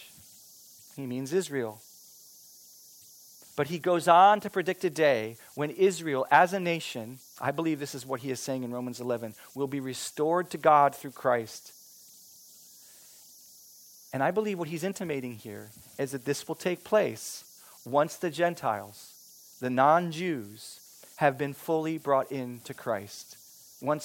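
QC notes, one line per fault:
Throughout: converter idle tones. A whistle sits around 5 kHz, clearest in the pauses between phrases, with a grainy hiss under the quieter speech, at about -28 dB relative to the signal. An undithered delta-sigma converter slips into repeating bit patterns whenever its input is small, and those cycles emerge as tones. On a spectrogram this shows as a thin horizontal line near 5 kHz through the gaps. The waveform's near-silent stretches carry a low, regular ripple instead of flat noise.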